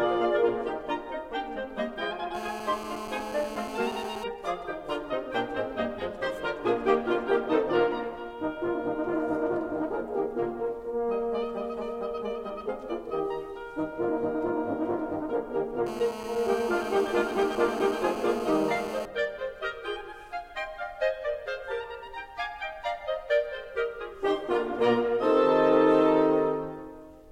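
GSM phone buzz intrudes from 2.35 to 4.24 s and again from 15.87 to 19.06 s. A nearby 2G phone on a call transmits in bursts 217 times a second. The audio circuit rectifies them. The result is a steady, raspy, harmonic-rich buzz about 10 dB below the music.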